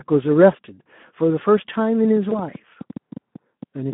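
Throughout, the speech carries plainly audible Speex codec damage. It sounds hoarse and noisy, which fits a low setting near 11 kbps. The band runs only from 150 Hz to 3.5 kHz.

From 2.05 s to the end, a train of clicks ticks over the sound, pauses included. Around fifteen pops arrive unevenly, about six per second, somewhat louder than the speech. Nearby interference is the likely cause.

At 2.29 to 2.33 s, VoIP packet loss concealed by the speech codec replaces 20 ms of audio. The decoder stretches the last sound to fill the gap, fading as it goes.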